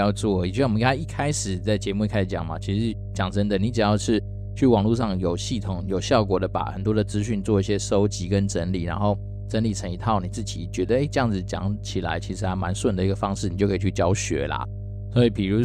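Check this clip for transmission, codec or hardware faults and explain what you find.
There is one hardware fault: mains hum runs through the whole speech clip. It is a steady low tone at 50 Hz, which points to a 50 Hz supply, and it is strong, sitting only around 10 dB below the speech. A ground loop or a nearby transformer is coupling the power line into the signal path. The result is a constant drone under the speech that stays audible through every pause.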